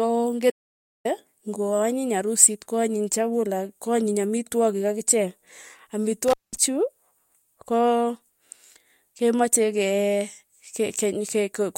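Audio dropout to silence at 0.50 to 1.05 s cuts this speech recording off mid-flow for about 546 ms, leaving silence with no room tone before the audio resumes on "ng'oa nyiny arusit ko". The likely cause is that the input was briefly lost while the recorder kept writing silence, so that stretch of speech is gone. Intermittent contact at 6.28 to 6.56 s shows a loose plug or cable opening for about 195 ms. The signal drops out with crackle at the edges, and faint hiss remains while the connection is broken.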